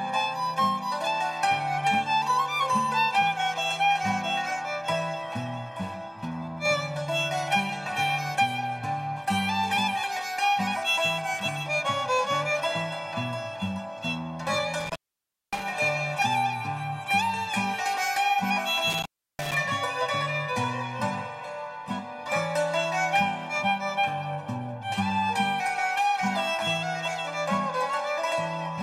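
Intermittent contact interrupts the audio twice, from 14.80 to 15.63 s and 18.90 to 19.54 s. A loose cable or plug momentarily opens the line for about 571 ms and 337 ms, leaving faint hiss. The waveform shows near-flat gaps bordered by crackle spikes, visible as broadband vertical streaks on a spectrogram.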